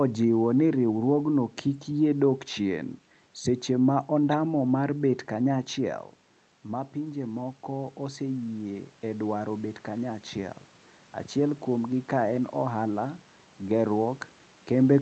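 From 6.67 to 10.63 s you can hear the automatic gain rising: after the voice drops by about 9 dB, as the talker moves back around 5.5 s, the gain control slowly adds about 6 dB, so voice and room noise swell up together.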